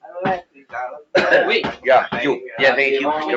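A speech-tuned noise suppressor was left active on this non-speech audio, and it acts throughout. It treats sustained content and ambience as noise, so the level swings by around 10 dB as held parts sink and attacks pass, giving a pumping, thinned character.

The noise suppressor cuts the sound hardest in three spans: 0.01 to 0.17 s, 0.41 to 0.74 s, and 0.98 to 1.14 s. The deepest drops reach about 20, 21 and 21 dB, so steady and decaying material sags or is clipped short there. The call path's roughly 8 kHz bandwidth is audible as a dull top end.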